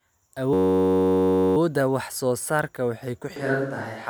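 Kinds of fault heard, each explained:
System hang loop: From 0.53 to 1.57 s the speech freezes into one 10.67 ms slice of audio replayed 97 times. That fits a 512-sample buffer cycling while the system stalled, and it sounds like a steady buzz at 93.8 Hz. On a waveform the same short shape repeats exactly. A spectrogram shows evenly spaced horizontal harmonic lines at multiples of 93.8 Hz in place of normal speech structure, with sharp edges at both ends.
Switch to a distant microphone: Right after "waxay ku", at 3.36 s, the speech turns roomy and hollow with thinner bass and stays that way to the end. The likely cause is that the close microphone dropped out and a farther one took over. Loudness stays about the same, but background noise rises to roughly 30 dB below the speech. A spectrogram shows weaker low frequencies, reverberant smearing after each sound and a raised noise floor, all starting at one sharp boundary.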